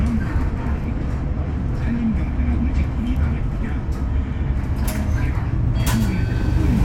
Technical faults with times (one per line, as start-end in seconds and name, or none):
none